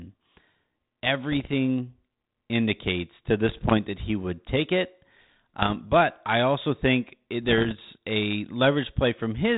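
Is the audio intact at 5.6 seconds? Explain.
No. From 5.6 to 5.75 s there are bit errors on an ADPCM link, here a 32 kbit/s G.726 stream. Each flipped bit throws off the decoder's step size and predictor, so the error rings on briefly, producing pops, rough bursts and short jumps in level.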